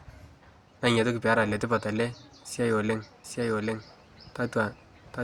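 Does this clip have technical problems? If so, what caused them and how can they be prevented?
Yes. From 3.24 s, just after "letipat ele siai oooleng", to the end, a doubled audio track appears. A full-band copy at roughly the original level trails by about 0.7 s, likely because a second, slower capture path recorded the sound again. On a spectrogram the same patterns repeat shifted right, beginning abruptly with no decay tail. On the waveform, overlapping envelopes fill the gaps. Prevent it by routing the source through a single capture path and disabling any monitoring or loopback feed into the recording.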